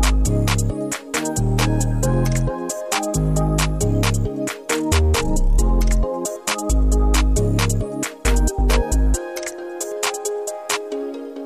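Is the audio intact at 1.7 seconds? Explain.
No. The signal was likely truncated to about 9 bits without dither, throughout the clip, so the rounding error tracks the sound, roughly 45 dB down, making quiet passages gritty and grainy.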